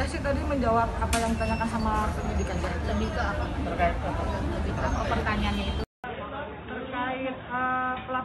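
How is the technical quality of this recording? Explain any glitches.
The recording has one clear glitch. At 5.84 s the sound drops out for about 200 ms, then returns noticeably duller and boxier, with nothing above about 3.8 kHz, somewhat quieter, and carrying a faint new background noise well below the signal. It stays that way to the end of the clip. The sudden narrowing, the shift in tone and level, and the brief gap at the transition most likely come from an input switched to a poorer device partway through the recording.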